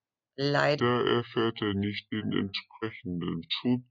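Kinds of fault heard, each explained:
Section at the wrong speed: from 0.8 s the speech turns deep and slow, about seven semitones down at 0.68 times speed, likely from a wrong playback clock.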